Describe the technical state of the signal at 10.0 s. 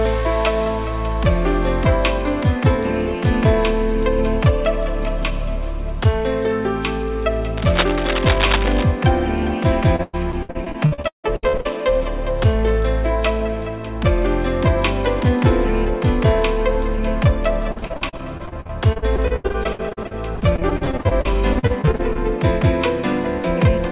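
Repeated packet loss, 9.96 to 11.78 s: lost or late packets are patched by extending the last sound, leaving choppy audio with pieces missing.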